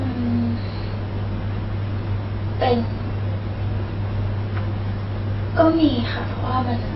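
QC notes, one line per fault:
Throughout, AAC compression: the speech sounds dull and smeared, with nothing above 5.6 kHz and a warbling, fizzy texture on sibilants, likely from heavy low-bitrate AAC-LC coding, which fits a rate near 16 kbps; the swirling artefacts set it apart from a plain low-pass filter.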